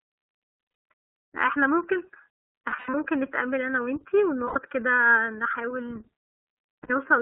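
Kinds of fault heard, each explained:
Channel delay (comb filtering): One channel lags the other by about 0.7 ms, and summing to mono cancels evenly spaced frequencies, the first near 700 Hz. The speech sounds hollow and phasey throughout. A spectrogram shows fixed dark horizontal notch bands running the whole clip.
iLBC codec: A narrowband VoIP codec that codes each frame on its own. Here the speech is clear but plainly rough and synthetic, confined to about 300 Hz to 3.6 kHz, which fits the 13.33 kbps mode with 30 ms frames. A spectrogram shows an empty region above that ceiling.
Lost iLBC frames: Packets went missing, and the decoder bridged each gap by repeating the last pitch cycle mixed with noise. This is heard as brief held, buzzy vowels at 0.41–0.83, 2.69–2.95, 4.47–4.57 and 6.83–6.90 s. The waveform shows stretches of copied, repeated cycles, and normal speech returns almost at once afterward.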